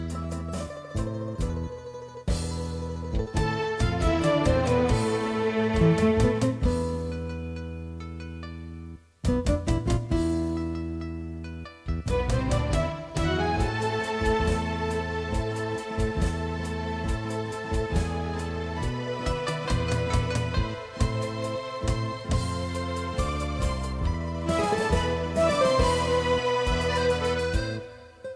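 No technical faults are audible anywhere in the recording.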